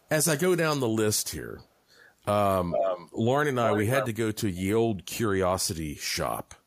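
From 2.7 to 3.11 s and 3.64 to 4.09 s, an echo leak returns the speech about 324 ms late, first near speech level, then quieter, likely from a far-end echo canceller missing loudspeaker pickup; spectrograms show shifted repeated harmonics.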